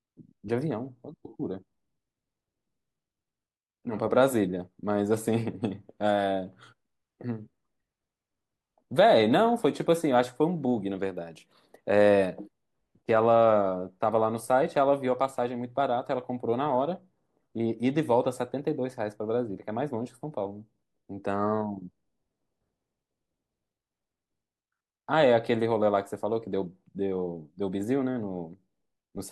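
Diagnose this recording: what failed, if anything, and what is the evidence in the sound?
Nothing in the speech stood out on listening as a sign that any stage of the chain had failed.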